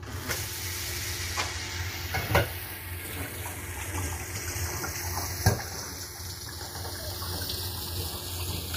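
The clip is everyday sound, and two faults run through all of it. The first is channels drifting apart. The left and right channels were captured on devices with separate clocks that disagree by roughly 30 ppm, so the delay between them grows steadily and reaches about a third of a millisecond by the end. When the channels are summed to mono, that slowly changing offset sweeps comb-filter notches through the spectrum, and the result is a slow, drifting flanging effect. The second fault is likely low-delay AAC compression of the AAC-ELD kind. Its short frames resolve tonal detail poorly, and heavy coding damage at what sounds like a bitrate around 24 kbps leaves the audio rough and grainy, with noisy fill between tonal components. The top band is cut off, with nothing above 15.6 kHz.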